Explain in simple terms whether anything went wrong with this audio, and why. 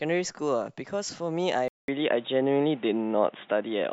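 At 1.68 s the speech cuts out for about 0.2 s, then comes back sounding dull and boxy until the end. Nothing above about 3.8 kHz gets through, so the crisp, bright part of the sound is gone. The volume shifts at the same moment, and a faint new background hiss appears. This is most likely an input switched to a poorer device: the recording moved to a lower-quality microphone or headset mid-take.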